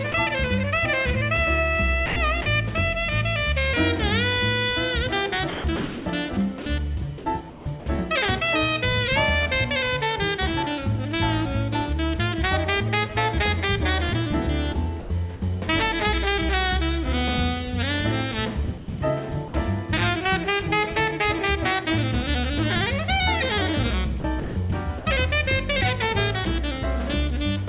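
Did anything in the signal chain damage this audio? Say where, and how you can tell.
Yes. The damage happens in call processing at the sending end, where a voice detector decides what is worth transmitting. At 0.12 s a 20 ms piece of sound drops out and is replaced by smooth, steady noise. That is sound dropped by the voice detector, most likely because the detector mistook quiet sound for background. Packet loss would leave a click, a hard gap or a repeated fragment. This fill is seamless noise matched to the background level.

The same stage causes repeated damage in five stretches: 2.06–2.46 s, 5.5–7.86 s, 14.74–15.42 s, 18.78–19.54 s and 24.2–25.06 s. Within each, the detector likely switches on and off more than once, replacing between about 140 ms and 780 ms of sound in total. This is sound chopped by the voice detector. Quiet edges vanish into comfort noise. Jitter-buffer trouble would stretch or warp the sound instead. 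The G.711-style band limit (nothing above 4 kHz) is constant through the whole clip, so it does not explain this gating.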